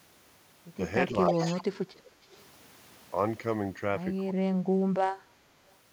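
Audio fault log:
1.27–1.63 s, echo leak: a distinct delayed copy of the speech trails by 314 ms at about 10 dB down, a discrete repeat rather than a reverberant smear. Likely an echo canceller passing loudspeaker pickup.
1.3–1.35 s, speech suppressed in double talk: a brief dip of around 10 dB, pumping the level down rather than adding anything. Likely the canceller ducking during overlap.
1.62–2.11 s, speech suppressed in double talk: about half a second where the speech sinks by roughly 35 dB, gaps rather than added sound, which sets it apart from echo. Likely overlap-triggered suppression.
4.36–5.49 s, speech suppressed in double talk: the speech drops away by around 30 dB over about a second. Likely the canceller muting during simultaneous talk.
5.7–5.75 s, echo leak: a faint repeat 319 ms behind the speech at about 35 dB down, nearly the same spacing as the earlier one, marking it as returned audio. 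Likely residual echo.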